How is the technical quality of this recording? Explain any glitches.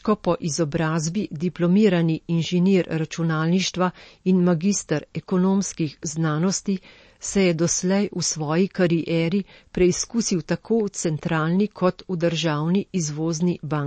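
The quality is poor, with clear MP3 compression damage throughout. From start to finish the speech has nothing above 8.3 kHz. The damage is plainly audible. The likely cause is MP3 encoding at a low bitrate, which fits something near 36 kbps. With so few bits, the encoder drops the treble entirely above a fixed point. It also discards weaker frequency detail, which flickers in and out between frames. That gives a dull, watery sound, with swirling and metallic chirps on sibilants.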